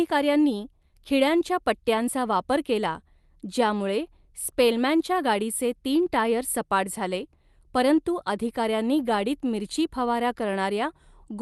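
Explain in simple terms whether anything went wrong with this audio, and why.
Nothing went wrong here: the speech came over an ordinary internet call connection, which shaves a little off the very highest frequencies the way calls usually do, and nothing in it stands out as a problem.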